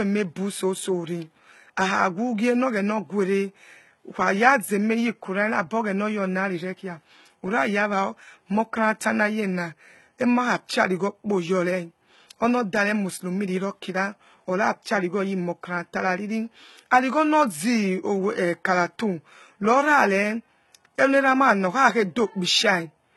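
Speech, with heavy codec damage throughout. Nothing reaches above 11.8 kHz. The treble is rebuilt and sounds gritty and lispy on s sounds. The likely cause is HE-AAC compression at a very low bitrate, around 16 kbps.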